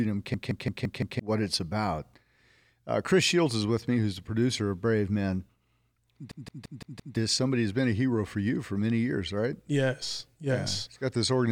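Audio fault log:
0.34–1.20 s and 6.32–7.17 s, system hang loop: a 171 ms block repeats exactly five times at 5.86 Hz, a machine-gun stutter from a frozen driver replaying its ring buffer (fits an 8192-sample buffer), losing about a second of audio each time. The waveform shows identical repeating blocks, and the spectrogram shows vertical seams at each repeat.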